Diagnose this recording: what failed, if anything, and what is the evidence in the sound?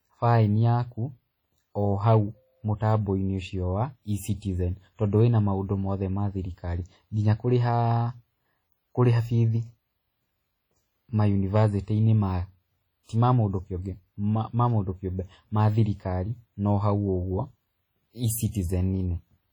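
Heavy codec damage throughout the speech, ringing and washy with hiss breathing with the signal, is likely WMA compression at a low bitrate near 32 kbps; unlike clipping, it never stops.

Hard clipping at a converter or format stage gives brief crackle only at peaks, 2.07–2.17 s, 2.91–2.95 s and 11.56–11.64 s, where overdrive of about 1–3 dB cuts tops flat.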